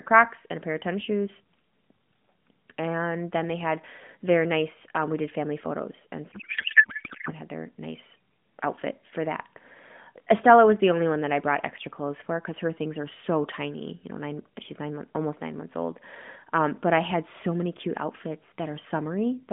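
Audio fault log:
6.32 to 7.34 s, codec payload misread: for about a second the speech turns into garbled, warbling noise that barely follows it. This points to octet-aligned AMR frames being unpacked as bandwidth-efficient, so the narrowband decoder reads shifted fields and synthesises nonsense.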